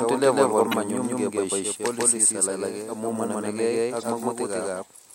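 A doubled audio track runs throughout: the whole speech signal is repeated roughly 150 ms later at about equal level, with no added decay, likely from a second, slower capture path mixed in. Damaged data in a compressed stream appears at 0.70–0.74 s and again at 3.99–4.03 s, right after "policies alage amu manamegei". Each time the decoder misreads corrupted frames and resyncs, leaving a brief glitch.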